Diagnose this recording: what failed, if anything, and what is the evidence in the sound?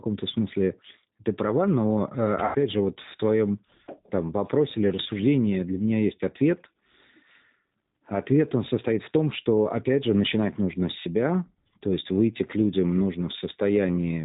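The codec stage failed to preserve full quality. Throughout the 14 s of speech, the band stops sharply at 4 kHz, and the voice has the slightly rough, synthetic texture of G.729, here the G.729A variant. That points to an 8 kbit/s stream rebuilding each 10 ms frame from a vocal tract filter, a pitch predictor and a few pulses. A plain telephone band-limit would sound narrow but smooth. The rough, model-built grain is what marks this as codec damage.

At the network stage, packet loss concealed by the speech codec occurs from about 2.45 to 2.56 s, just before "же вот в твоем". The sound is drawn out into a fading buzzy tone or coloured noise rather than stopping. The decoder repeats its last pitch and filter settings with falling gain across the gap of about 100 ms, which fits five lost 20 ms packets. A dropout or buffer glitch would give silence or a click. This is a smeared continuation whose weakness carries briefly into the returning speech.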